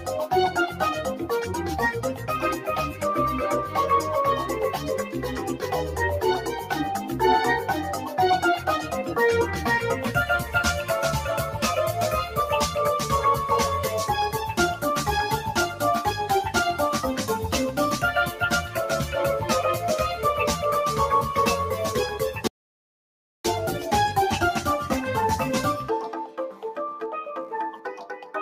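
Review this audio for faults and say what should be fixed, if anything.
Sound cut by the noise suppressor at 6.44–6.7 s, 26.26–26.64 s and 27.71–28.34 s: the suppressor treated wanted sound as noise, pulling level down by about 6 to 8 dB. Loosen its threshold or attack.

Audio dropout to silence from 22.47 to 23.45 s: nearly a second of silence with no room tone, likely a lost input link. Secure cabling and input routing.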